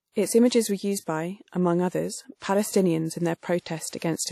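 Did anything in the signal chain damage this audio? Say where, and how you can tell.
Yes, at the codec stage throughout the clip. The speech has plainly audible transform-coding damage: a washy, ringing quality and a hiss that rises and falls with the signal, with nothing above 16.4 kHz. That points to a lossy encode, likely WMA compression at about 48 kbps, where long blocks smear quantisation noise and weak spectral lines are zeroed. Unlike a plain low-pass filter or analogue noise, the hiss tracks the signal.

The codec also causes a pre-echo at 3.89 to 3.93 s. A short hiss arrives about 37 ms before a sharp onset, and the attack itself sounds softened. The encoder spread quantisation noise, sized for the loud attack, across the whole transform block, so it also fills the quiet moment before it. A latency echo or reverb would follow the sound. This noise comes before it and lasts about 37 ms.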